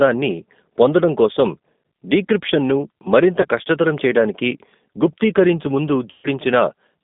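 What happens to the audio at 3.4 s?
From 3.41 to 3.47 s there is VoIP packet loss concealed by the speech codec. About 30 ms of audio, which fits three 10 ms frames, went missing. The decoder filled the gap by repeating its last pitch and filter at falling gain, so a short, stretched buzzy tone or coloured noise fades where the sound should continue. Unlike a plain dropout, there is no silent gap or click, and the sound stays weak or distorted for a moment after the packets return.

Underneath, the G.729 codec at 8 kbit/s affects the whole clip. It rebuilds speech from a vocal tract model plus a few pulses per frame, inside a line band of about 200 Hz to 3.6 kHz. That gives a rough, synthetic texture throughout, not just the dull sound of simple band-limiting.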